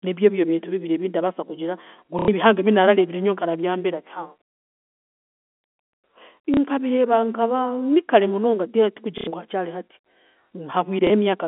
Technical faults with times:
2.19-2.28 packet loss with last packet repeated
6.54-6.57 packet loss with last packet repeated
9.18-9.27 packet loss with last packet repeated
11.07-11.10 packet loss with last packet repeated

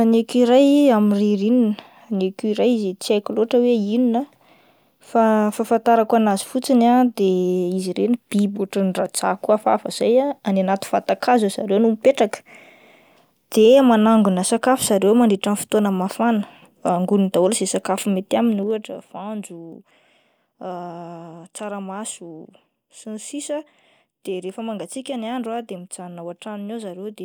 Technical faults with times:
18.50-18.97 zipper noise

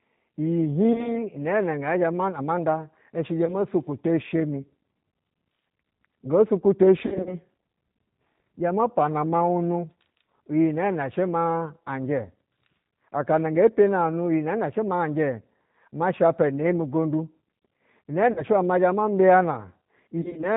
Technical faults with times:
0.00-20.56 G.729 codec
0.93-1.21 VoIP packet loss concealed by the speech codec
3.45-3.56 VoIP packet loss concealed by the speech codec
7.06-7.35 VoIP packet loss concealed by the speech codec
18.32-18.44 VoIP packet loss concealed by the speech codec
20.21-20.48 VoIP packet loss concealed by the speech codec

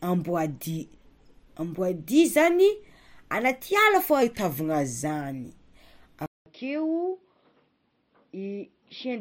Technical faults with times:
0.64-1.47 drift correction step
4.22-5.05 drift correction step
6.26-9.21 input switched to a poorer device

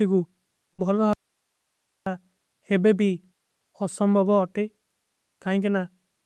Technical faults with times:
0.73-0.81 burst of packet loss
1.13-2.06 audio dropout to a faint residue

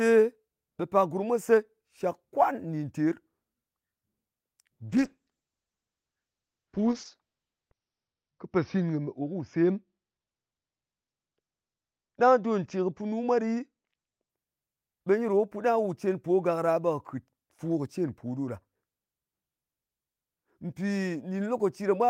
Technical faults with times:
4.89-14.35 call bitrate drop

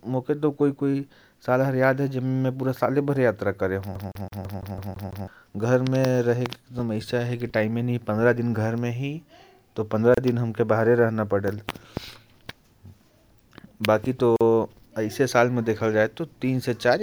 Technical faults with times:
3.95-5.28 CD stuck on one turn
10.14-10.18 gap at a join of encoded pieces
14.36-14.41 gap at a join of encoded pieces

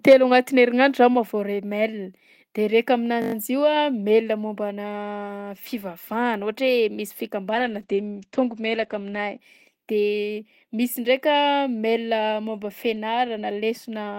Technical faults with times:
0.08-0.14 microphone overload
0.13 microphone volume stepped down
3.22-3.34 system hang loop
7.55-9.45 call bitrate drop

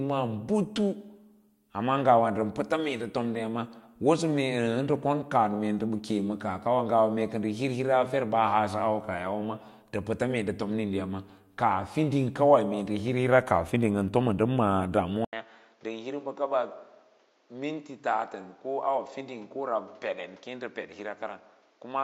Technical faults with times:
15.25-22.04 input switched to a poorer device

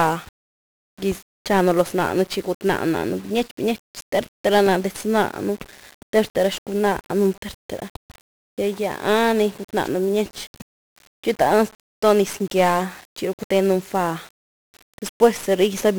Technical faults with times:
0.00-15.99 1-bit DFPWM compression

